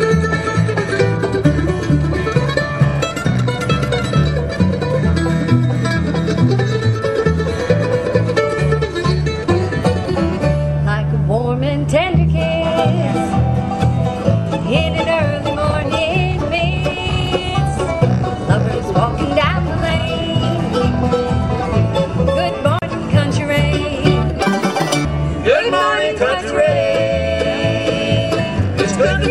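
The audio is read two samples at a time (double speed) for a short stretch from 24.42 s to 25.05 s. Across that span the playback runs at 2.0 times normal speed and sits an octave higher, because the reader treats each pair of samples as a single frame, as if the stream had two channels or samples twice as wide.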